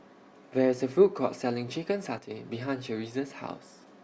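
From 2.18 to 2.31 s the speech abruptly drops by about 6 dB, then snaps back. The likely cause is one channel dropping out: with one side of the stereo pair briefly lost, the mono sum keeps only half the shared signal.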